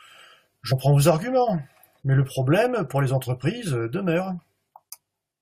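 A speech clip with compressed frames skipped at 0.71 s. The audio jumps ahead by about 150 ms, which fits roughly seven 23.2 ms frames. Unlike a dropout, no silent gap appears.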